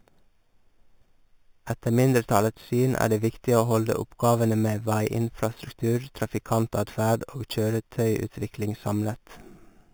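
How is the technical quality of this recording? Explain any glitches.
The recording has a clear technical flaw that runs through the whole clip: imaging from sample-and-hold upsampling. Speech that was captured at 8 kHz was converted to 48 kHz by holding each sample for six output samples, with no smoothing filter afterwards. The missing filter lets mirror copies of the 0 to 4 kHz speech band through. The lowest copy fills 4 to 8 kHz at about 19 dB below the speech, and further copies sit around each multiple of 8 kHz. The result is a bright, metallic fizz that rises and falls with the speech and traces pitch movements in the opposite direction. On a spectrogram, the harmonic pattern appears flipped above 4 kHz. On a zoomed waveform, the signal looks like small flat steps.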